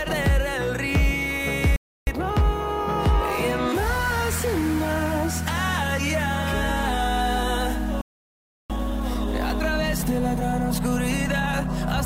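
At 1.76 s and again at 8.01 s the sound halts in mid-flow for about 0.31 s and 0.68 s. This is a playback stall, likely the player running short of data. It is a clean silence long enough to notice, unlike a brief click or a momentary dropout. Each stall is followed by time-compressed catch-up, from 2.07 to 2.37 s at double speed and from 8.70 to 11.70 s at 1.15 times. The audio is hurried but keeps its normal pitch, which sets it apart from a simple speed-up.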